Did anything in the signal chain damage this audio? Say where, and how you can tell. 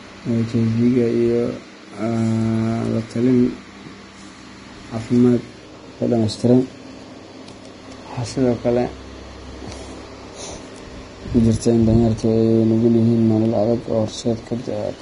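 Yes, the codec stage: throughout, the speech sounds hissy and grainy, and the spectrogram ends flat at 10.6 kHz. This is likely heavy low-bitrate Vorbis compression turning treble detail into noise.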